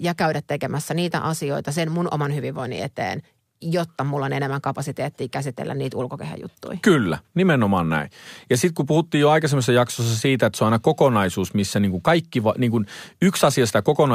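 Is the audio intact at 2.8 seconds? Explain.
Yes, the speech at 2.8 seconds is intact, with no dropout, click, distortion or other technical fault at that moment.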